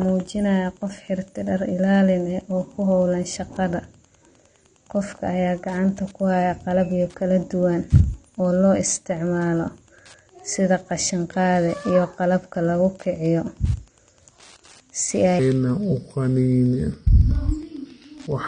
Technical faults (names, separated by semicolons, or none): Wi-Fi interference; AAC compression; section at the wrong speed